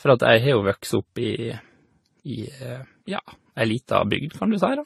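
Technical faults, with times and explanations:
Throughout, likely transcoding between lossy codecs: smeared AAC-style artefacts overlaid with Vorbis warble, and nothing above 13.8 kHz. Unlike single-codec compression, two distinct artefact textures are heard together.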